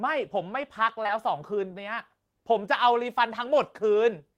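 Short concealed packet loss strikes twice in quick succession in this speech, first at 1.03 to 1.07 s and again at 1.07 to 1.1 s. Each time about 20 ms of audio failed to arrive, and the receiver patched the gap by extending the preceding sound for roughly 14 and then 18 ms before blending back into real audio. Back to back, the two patches are heard as a brief smeared wobble.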